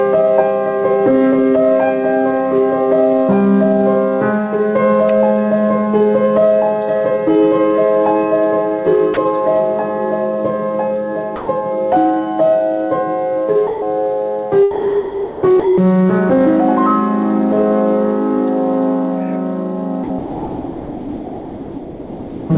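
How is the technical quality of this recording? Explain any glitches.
The recording has repeated dropouts where the audio gives way to steady background noise. The whole clip passes through a call path with nothing above 4 kHz, which fits a narrowband G.711 call.

Sound dropped by the voice detector occurs at 9.14–9.17, 11.36–11.48, 13.67–13.82, 14.71–15.43, 15.60–15.78, 20.04–20.10 and 20.19–22.50 s. The sender's voice detector likely judged the sound to be background and stopped transmitting, so the receiver filled each gap with generated comfort noise. The gaps run from 30 ms to 2.3 s. The longest is the final one, which lasts almost to the end. In each gap the audio cuts to flat noise and returns when the detector triggers again.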